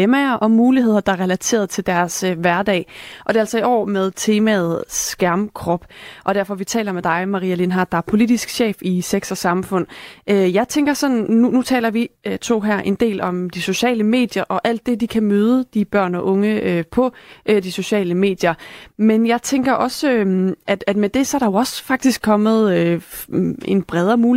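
No technical fault can be heard anywhere in the speech recording. There is nothing in the signal that calls for a timestamp or a remedy.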